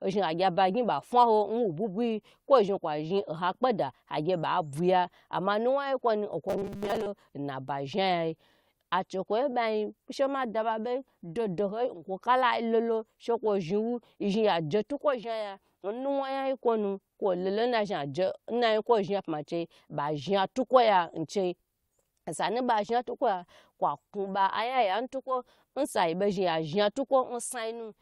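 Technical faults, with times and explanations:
6.49 to 7.08 s, robotic sound from repeated short buffers: the speech turns into a rigid metallic buzz at 200 Hz. It's likely audio arriving too late, so a roughly 5 ms chunk gets replayed over most of that stretch.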